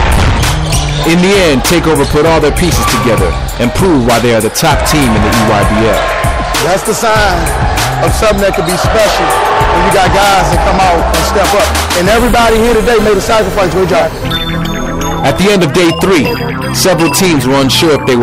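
Hard clipping runs the whole way through: the signal's pushed about 20 dB past what the stage can handle, so something like a third of it gets sliced flat on top. Those squared-off peaks spray high harmonics, giving a constant harsh fuzz on everything loud.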